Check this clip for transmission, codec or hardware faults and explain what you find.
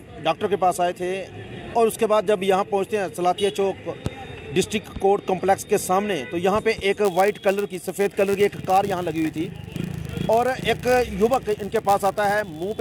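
One fault is present: a block size mismatch (padded), running from 7.04 s to the end of the clip. There, one stage hands over blocks slightly shorter than the next stage reads, and the shortfall is filled with zeros. The tiny silent gap in every block produces a buzz at 99.6 Hz, the block rate, and the audio runs slow by a factor of 0.996 while timbre stays put. That unchanged timbre separates it from a sample-rate mismatch, which would shift pitch and timbre along with speed.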